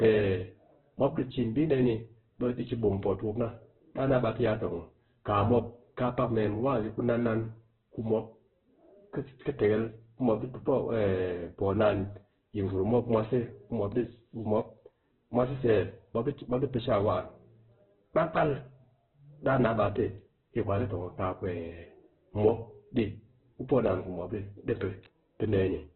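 From start to finish the speech carries heavy coding damage, most likely Opus compression at a very low bitrate, around 8 kbps. Nothing remains above 4.2 kHz, so the band is narrow and the voice sounds boxed in. Where the encoder runs short of bits it fills bands with folded or noisy energy instead of leaving gaps, so voiced sounds turn rough and grainy. There is less of the watery swirl typical of MP3.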